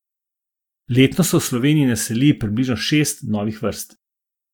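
Speech recording with no audible technical faults anywhere.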